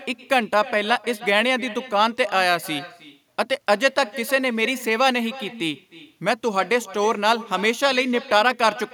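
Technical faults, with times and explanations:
Throughout, echo with no canceller: every phrase is trailed by a faint, thin copy of itself arriving roughly a third of a second later, sitting about 18 dB under the direct speech. What you're hearing is the far end playing the call out of a loudspeaker, its microphone catching that playback, and nothing on that side subtracting it before it comes back down the line, so the round-trip delay shows up as this ghostly repeat.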